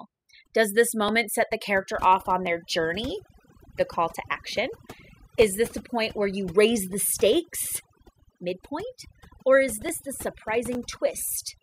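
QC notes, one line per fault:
Throughout, overdone noise removal: the background drops and breaks up into twinkling specks, and the speech has its softer edges and breathier parts hollowed out. A noise reduction stage pushed too hard keeps shutting individual frequency bands down whenever they sit close to its idea of the noise floor, so low-level parts of the speech are switched off along with the hiss, leaving isolated bursts that flicker.
1.09, 2.47, 6.10, 9.89 and 10.75 s, dropped samples: each of these moments carries a single sharp, dry click, brief and narrow, sitting like a thin vertical stroke across the whole spectrum, with nothing audibly missing around it. The likely cause is a tiny gap in the sample stream, well under a millisecond's worth, so the waveform leaps straight from one value to a later one and that sudden step is what produces the tick.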